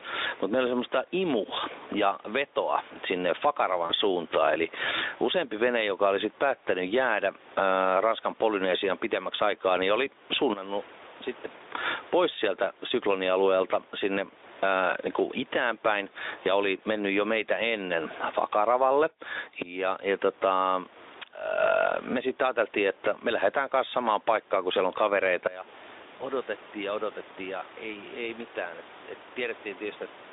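Gain pumping runs through the whole speech clip. The level is pulled down on each loud syllable, swinging by about 15 dB. Loud and soft parts sit squashed together. Likely cause: input gain set far too high, with a fast limiter clamping it.

At 3.85 to 3.92 s, VoIP packet loss concealed by the speech codec cuts in. About 40 ms of audio is missing, which fits two lost 20 ms frames. The decoder stretches the last sound into a short, fading tone or noise. The speech stays weak for a moment afterwards.

At 26.17 to 26.23 s, the same concealment recurs, shorter this time. About 20 ms is missing, consistent with one lost frame. A brief, fading tone or noise replaces it, and the sound recovers slightly late.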